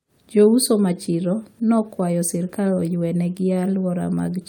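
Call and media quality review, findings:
Clock drift between sender and receiver, whole clip. Sender clock about 3% slow relative to receiver. Jitter buffer draining steadily, forcing receiver-side stretching to avoid underrun. Probable component: endpoint audio clocks unsynchronised, with the receiver's playout adaptation compensating. Small timing hiccups recur through the speech at uneven intervals.

Repeated timing corrections, 0.38–4.07 s. Playout running at 97% speed, with small repeated segments padding the stream, roughly 150 ms added in total. Edits all in the same direction, unevenly spaced. Probable component: jitter buffer time-stretching to keep up with the slow sender. Each edit small.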